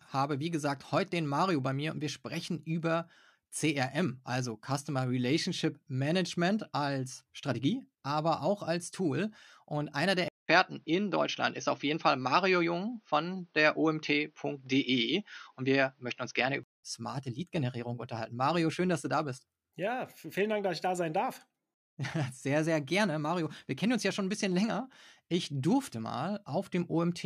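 Speech, and at 10.28 s there's a 200 ms gap, then the sound goes boxy, nothing above 6.4 kHz, a few dB different in level, with a new noise floor well below it, until 16.83 s. That's likely the input switched to a poorer device.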